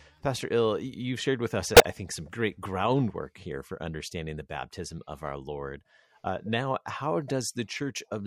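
A loud, garbled glitch cuts through the speech from 1.75 to 1.86 s, peaking around -5 dBFS. It's a corrupt frame decoded: bit errors in a few consecutive compressed frames were played anyway, scattering energy across wrong frequencies.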